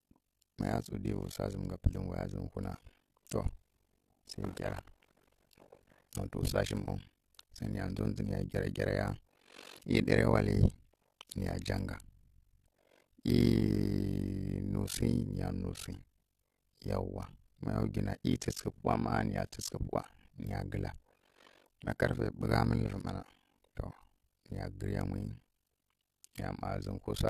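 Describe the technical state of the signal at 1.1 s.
A swirly, hollow, smeared quality runs through the speech at 1.1 s and across the whole clip, with softened attacks. This is generation loss, likely from AAC-LC encoded around five times, each pass requantising on a shifted frame grid until the noise and spectral holes build up, beyond what 64 kbit/s alone would explain.

A rough flutter also sits on the sound at 1.1 s and throughout, at around 50 Hz with level dips of about 60 dB. This is overlap-add ripple: frames were windowed and rejoined with an overlap whose gains don't sum evenly, so loudness pulses once per frame.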